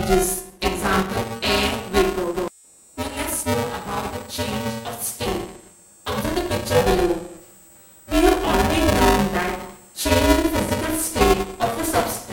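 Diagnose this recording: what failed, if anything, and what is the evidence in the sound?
A constant robotic buzz at 345 Hz runs through the whole recording, the mark of buffer tearing at the driver or buffer stage. The rate fits a 128-sample buffer. Write and read pointers cross within each period, so roughly a third of every buffer replays audio a few milliseconds old, with hard joins. Unlike mains hum, the buzz sits on the signal and vanishes with it.

From 1.24 s to the end, a switching supply whistle sits near 8 kHz, drifting between 7.98 and 8.08 kHz, about 25 dB below the signal. This is analogue power noise leaking into the wiring. It persists regardless of signal and wanders in pitch, unlike the fixed, signal-dependent tearing buzz.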